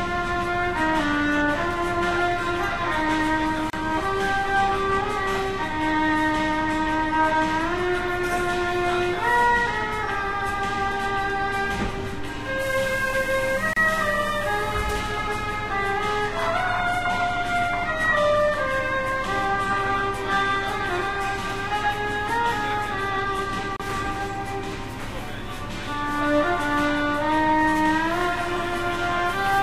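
At 3.70, 13.73 and 23.76 s, roughly every 10 s, the continuous sound drops out for about 32 to 33 ms: a gap at a join of encoded pieces. Separately encoded segments were joined with their leading encoder delay and padded final frames untrimmed, leaving short silences with smeared edges before the sound resumes where it stopped.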